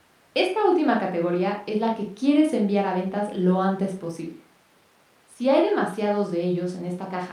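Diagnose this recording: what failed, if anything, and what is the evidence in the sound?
Nothing failed: no stage of the chain leaves an audible fault anywhere in the speech.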